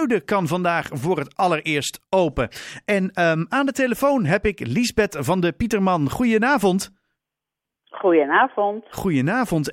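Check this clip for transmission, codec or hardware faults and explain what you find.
I can hear no transmission, codec or hardware faults here.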